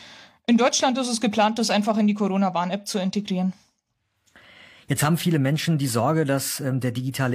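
No technical faults can be heard anywhere in the recording.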